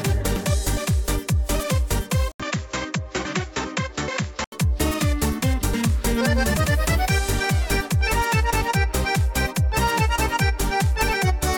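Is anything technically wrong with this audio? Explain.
Yes. From 2.32 to 4.52 s, after an 80 ms gap, the sound dulls, loses everything above 7.6 kHz and drops about 5 dB, likely an input switched to a poorer device.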